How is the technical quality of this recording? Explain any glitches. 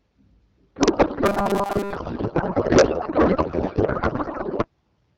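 The recording is pretty rough: most of it is garbled by a decoding fault, with a robotic stretch inside that.

From 0.75 to 4.68 s there's a codec payload misread. The AMR-WB frames were packed octet-aligned but read as bandwidth-efficient, so the speech turns to warbly, garbled noise.

From 1.26 to 1.96 s there's robotic sound from repeated short buffers. A fixed 200 Hz metallic buzz sits on the audio, likely from a 5 ms chunk looped while most of the real audio was skipped.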